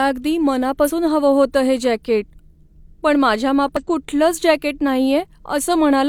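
At 0.84–0.90 s, just before "हवं होतं हे जॅकेट", and at 3.77–3.83 s, after "पण माझ्या", damaged data in the compressed stream makes the decoder lose sync and search for the next frame header, causing a brief glitch each time.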